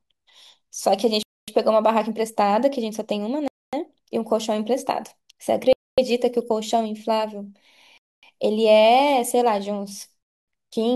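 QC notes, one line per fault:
1.23, 3.48, 5.73, 7.98 and 10.23 s: gap between chunks, 250 ms of silence after every 2.0 s chunk, the audio delivered in segments with dead time inserted at each join.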